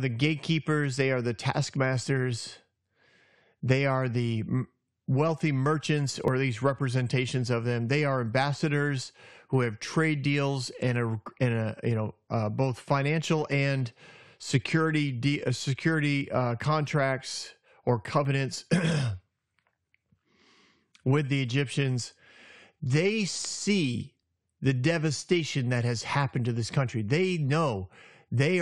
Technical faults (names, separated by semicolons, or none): overlap between stream segments